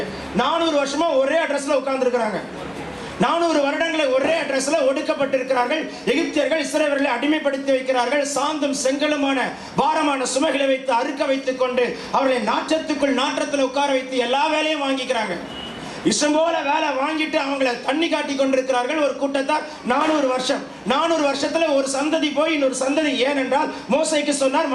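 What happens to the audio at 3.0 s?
Nothing goes wrong at 3.0 s: the audio plays through that moment intact, with no dropout, click or other fault.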